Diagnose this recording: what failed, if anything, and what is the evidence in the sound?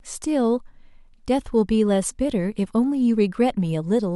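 Listening through the speech, nothing stood out as a fault at any stage of the chain.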